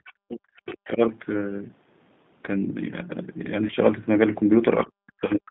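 Throughout, the speech carries G.729 codec damage, which fits an 8 kbit/s link. The band runs from about 150 Hz to 3.7 kHz, and the voice sounds rough and synthetic.

From 0.66 to 0.86 s, a faint second voice comes through at about 15 dB below the talker. This is the other side's voice leaking through, likely from a loudspeaker echo the canceller missed.

At 3.67 to 3.71 s, VoIP packet loss is concealed by the speech codec. This fits a single lost 20 ms packet. The decoder stretches the last sound into a brief tone or noise that fades.

From 4.85 s to the end, the speech is suppressed in double talk. This is likely the canceller ducking both voices at once. The talker's level dips by roughly 40 dB.

Within that stretch, from 5.25 to 5.35 s, the other voice leaks through again, about 20 dB below the speech.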